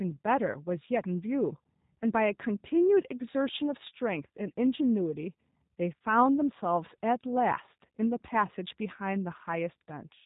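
Throughout, the speech passed through the G.729 codec, which fits an 8 kbit/s coding rate; nothing above 4 kHz survives, leaving it muffled, rough and plainly synthetic.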